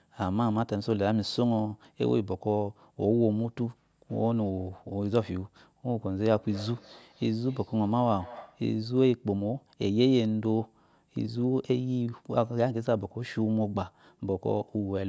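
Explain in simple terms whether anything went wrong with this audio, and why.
From 6.3 to 8.7 s there's feedback echo between two devices: the speech comes back about every third of a second, fainter and thinner each round.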